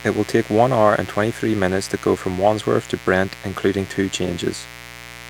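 From start to finish there's a raspy mains buzz on 60 Hz, sharp switching spikes stacking harmonics into the kilohertz range, sitting roughly 20 dB under the speech.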